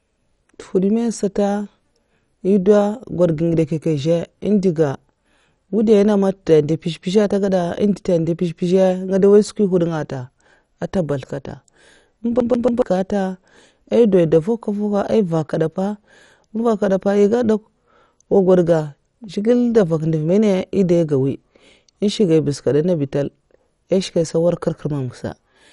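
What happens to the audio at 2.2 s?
MP2 compression artefacts are present at 2.2 s, as they are across the whole recording. Nothing is heard above 11.3 kHz, and the speech sounds dull and gurgling. The likely cause is MPEG Layer II coding that starves its upper sub-bands, which fits roughly 48 kbps.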